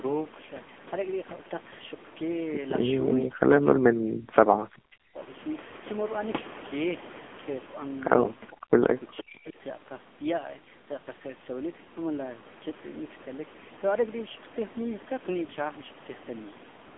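The speech passes throughout through the AMR narrowband mobile codec, heavily degraded. A 200 Hz to 3.5 kHz line band and nothing above 3.7 kHz leave it boxed-in and muffled, and its buzzy, synthetic texture points to a low bitrate near 6.7 kbps.

From 9.46 to 9.50 s, a loudspeaker-side echo canceller likely let some microphone pickup through, producing a brief echo leak. A very faint copy of earlier speech, delayed by 460 ms and far below the main level, flickers into the background.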